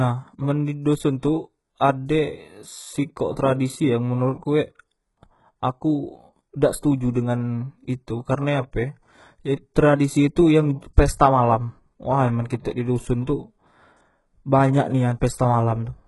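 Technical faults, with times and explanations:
Throughout, HE-AAC compression: this speech sounds heavily coded, with its upper band synthetic and nothing at all above 11.5 kHz. The likely cause is HE-AAC at a very low rate, consistent with about 12 kbps. Only the lower spectrum is truly coded, and the treble is patched in by copying lower bands upward under a coarse envelope. Because those copied harmonics misalign with the real ones, s sounds come out gritty, metallic or lispy.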